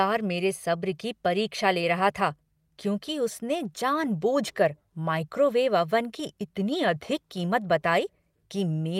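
No technical faults can be heard anywhere in this recording.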